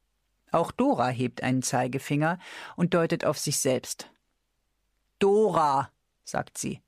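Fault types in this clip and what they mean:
No faults detected; playback is continuous with no dropouts, clicks, distortion or level jumps.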